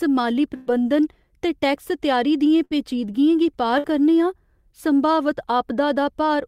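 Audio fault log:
0.55–0.70 s, 2.65–2.74 s, 3.78–3.87 s: burst of packet loss. About 120, 60 and 60 ms of audio are lost. Each gap is bridged by the last sound held and faded before playback skips ahead.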